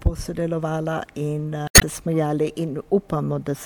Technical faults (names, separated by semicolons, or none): damaged data in a compressed stream